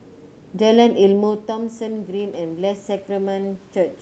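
At about 1 s the talker moves away from the microphone and the speech level drops by about 12 dB. From 1.17 s to the end, automatic gain rising follows as the gain control slowly lifts its gain, so speech and room noise swell together.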